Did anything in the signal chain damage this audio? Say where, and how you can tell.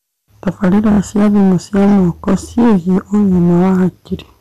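Yes. Hard clipping runs through the whole speech clip: the level is driven about 11 dB past what a converter or sample-format stage could pass, so roughly a tenth of the samples sit flattened against the ceiling. Every loud syllable carries a harsh fuzz rather than isolated crackle. On the waveform the peaks are sliced into flat plateaus; on a spectrogram, dense harmonic energy smears upward into the high kHz range above each voiced stretch.

Repeated frames sit at the codec or storage stage, from 0.91 to 0.99 s, just before "cia thimũ cia". One 24 ms compressed frame was played three extra times, adding 72 ms and producing a quick mechanical stutter. A waveform shows the same short shape tiled identically four times; the spectrogram shows a repeating vertical block pattern.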